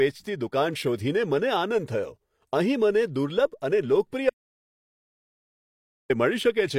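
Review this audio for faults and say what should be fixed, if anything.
Audio dropout to silence from 4.30 to 6.10 s: the speech cuts to silence with no room tone for 1.8 s, likely a lost input link, with everything in between gone. Prevent it by securing cables and wireless links and monitoring input levels live during recording.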